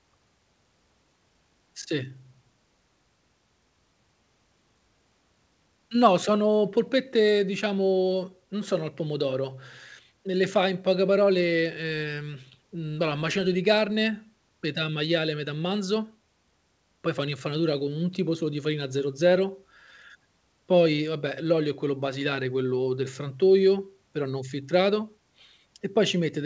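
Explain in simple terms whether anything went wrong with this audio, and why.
Nothing went wrong here: the speech came through an ordinary call connection whose codec carries the sound only up to 8 kHz and leaves out anything higher, which is simply how that kind of call handles audio.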